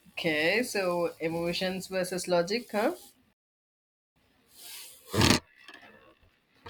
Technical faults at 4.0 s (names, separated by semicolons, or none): playback stall